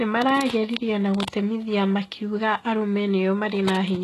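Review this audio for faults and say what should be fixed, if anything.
The whole speech track sounds like HE-AAC compression, likely at a low rate around 16 kbps: nothing above 12.3 kHz, and the rebuilt treble makes sibilants gritty and metallic. Encode at a higher bitrate, or use full-band AAC or Opus.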